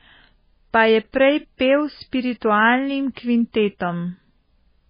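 Heavy MP3 compression runs throughout, likely at a very low bitrate: nothing above 5 kHz, a hard spectrogram ceiling, and swirly, watery speech from flickering weak lines.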